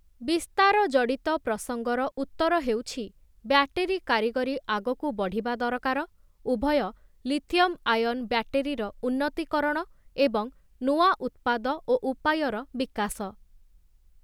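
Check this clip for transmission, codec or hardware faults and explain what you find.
One fault is audible, a digital wireless dropout. From 2.11 to 2.18 s the speech drops into a clean hole of near silence lasting about 61 ms, with no crackle, hiss or burst of noise on either side; the sound simply fades out almost instantly and returns. That clean gap comes from the receiver muting itself when the digital radio link lost too much data to reconstruct, applying a very short fade rather than passing corrupted audio through.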